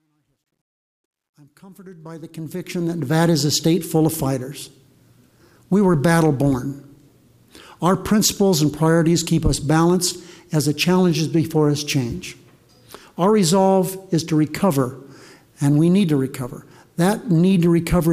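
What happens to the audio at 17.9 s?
At 17.9 s the audio runs on intact, with no dropout, click, level jump or other fault.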